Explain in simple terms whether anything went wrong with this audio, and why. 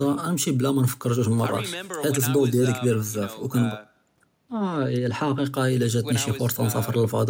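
Nothing went wrong here; the speech comes across steadily the whole way, with no glitches, dropouts or odd sounds to point to.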